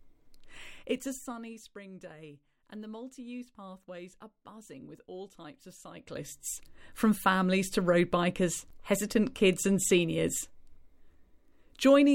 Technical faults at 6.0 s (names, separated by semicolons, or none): zipper noise